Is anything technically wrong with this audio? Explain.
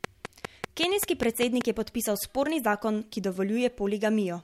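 Yes. From 0.04 s to 1.62 s, just before "je podpisal sporni zakon", a train of clicks ticks through the speech. About ten near-identical sharp pops arrive at a steady pace of 5.1 per second, peaking around 15 dB above the speech and audible in the gaps between syllables too. Such a regular, repeating pulse most likely comes from electrical interference from nearby equipment or a faulty connection or power supply, injecting the same spike at each cycle.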